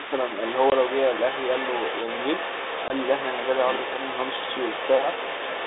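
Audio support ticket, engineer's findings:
Other side's voice leaking through: the echo canceller likely left part of the far-end loudspeaker signal in the mic feed. A second voice runs under the talker for the whole recording, about 10 dB down.

Packet loss on an ADPCM call at 0.70 s and 2.88 s: one 20 ms packet dropped each time and zero-filled, which knocks the decoder's predictor and step size out of sync. The result is a hard-edged gap, then slightly distorted speech until the decoder re-locks. The 32 kbit/s G.726 band of 250 Hz to 3.7 kHz carries through both gaps.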